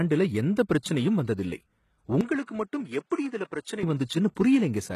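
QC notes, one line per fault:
throughout: HE-AAC compression is the likely cause of the plainly audible codec damage, with nothing above 12.3 kHz. Only the lower band is coded directly and the treble is rebuilt from copied lower bands under a coarse envelope, so harmonics fail to line up across the crossover.
2.21–3.83 s: input switched to a poorer device, likely, with no silence at either switch. The band narrows to nothing above 11 kHz, the level drops by about 10 dB, and a new noise floor appears roughly 50 dB below the signal, so the sound turns duller until 3.83 s.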